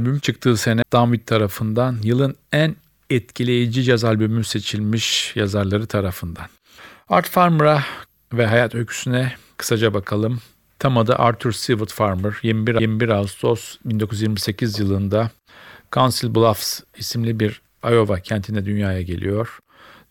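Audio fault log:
0.82 s and 12.79 s, CD skip: each time a tick cuts through the speech and the sound resumes at a different place, as if a short stretch were lost or repeated. The first carries a mute of roughly fifteen milliseconds, the second only a few milliseconds. The laser was knocked or hit a flaw, jumped to another turn of the disc's spiral, briefly silenced output, then carried on reading from the new track position.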